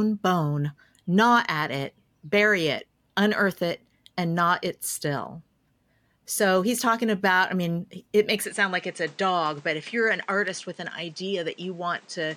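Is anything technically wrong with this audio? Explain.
Yes. From 8.44 s, after "I mean it makes", the input likely switched to a poorer device. Its narrower band drops everything above 9.3 kHz. The sound turns duller and gains faint new noise, with no gap.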